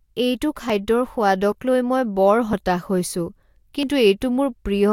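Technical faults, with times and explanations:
0.70 s, 1.52 s, 2.53 s and 3.83 s: dropped buffer (overrun). Each is a small jump in the speech. There is no gap. Around 10 ms of sound goes missing and the two sides butt together. The one at 1.52 s comes just before "লৈ মই বৰ", and the one at 2.53 s just after it. The likely cause is that the recording program fell behind and the hardware overwrote its samples.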